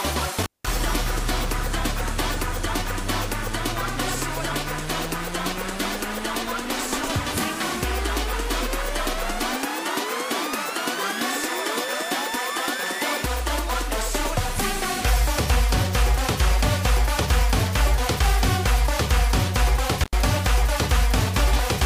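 Right at the start, around 0.43 to 0.68 s, there's an intermittent contact: a loose cable or plug briefly breaks the connection, and the sound drops out for about 186 ms with a crackle as it cuts and again as it returns. Faint hiss is left during the gap. The same thing happens near the end, at 20.01 to 20.14 s, this time a shorter dropout of roughly 91 ms with the same crackly edges.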